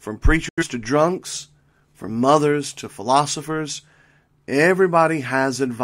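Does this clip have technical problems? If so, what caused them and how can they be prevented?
Yes. A digital broadcast dropout mutes the speech from 0.49 to 0.64 s, just before "to drunks from mothers". The receiver discarded what sounds like about two corrupted frames and silenced output until clean data returned. A concealment glitch would smear or repeat sound, but this dropout fades out in about 3 ms into true silence. Better signal strength at the receiver, or stronger error protection on the transmission, would prevent it.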